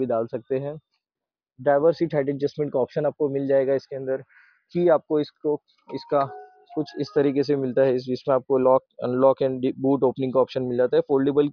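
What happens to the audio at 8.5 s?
Nothing goes wrong at 8.5 s; the audio there is intact, with no dropout, click, distortion or other fault to be heard.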